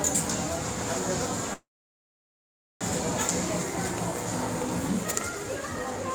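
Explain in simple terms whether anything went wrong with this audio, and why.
Something did go wrong: a call audio freeze. At 1.53 s the sound stops moving forward; the last bit of it smears into a brief fading buzz or hiss, then nearly 1.2 s of silence, until the audio picks up again at 2.83 s exactly where it left off. The likely cause is data arriving late over the network. Unlike a dropout, nothing is lost; the sound is simply paused and everything afterwards runs about 1.3 s late.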